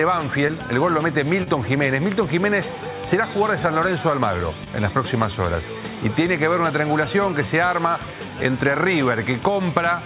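Three spots of short concealed packet loss turn up, at about 0.48 s, 1.43 s and 4.64 s. Each time roughly 20 ms of audio didn't arrive in time, so the receiver papered over the gap by extending the preceding sound and then blending back into the real signal. The patches run about 12, 28 and 20 ms, and you hear them as quick smears or wobbles. The band stops around 4 kHz, which fits a 64 kbps G.711 A-law call path.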